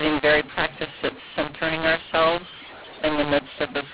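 A short speech clip over a telephone line, harsh and distorted from start to finish because of a mu-law and A-law mix-up: samples coded as mu-law are decoded as A-law, so every level is remapped wrongly, some louder, some quieter. Unlike clipping, the distortion doesn't only appear on loud peaks. The pauses fill with a noise floor, because the quietest samples get lifted well above silence, while the 4 kHz telephone bandwidth stays intact.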